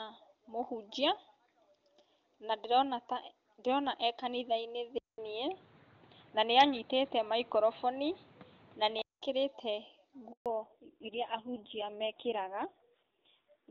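At 4.98 s a 200 ms silence precedes a duller, boxier sound with nothing above 4.6 kHz, a level change of about 5 dB and new background noise. The cause is likely an input switched to a poorer device. The change lasts until 9.22 s. At 10.32 s a handover gap cuts the speech off abruptly, leaving 140 ms of silence while the call moves between networks. From 10.46 s to the end, a fallback to narrowband removes everything above 4 kHz. The speech turns dull and raspy, which fits a drop from HD Voice to a low-rate narrowband codec.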